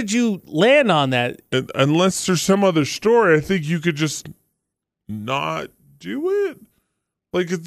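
From 1.53 s to the end, a section at the wrong speed plays at 0.852x, likely from a clock mismatch, dropping pitch about three semitones; spectrogram harmonics shift downward and stretch out.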